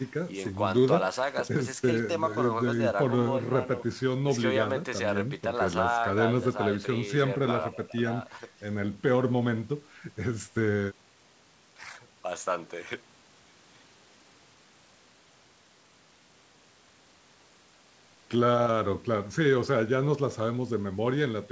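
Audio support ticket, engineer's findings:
Speech band-limited to 8 kHz, as expected after call microphone processing and the WebRTC call path through what sounds like a G.722 wideband codec, with no defects found in the signal.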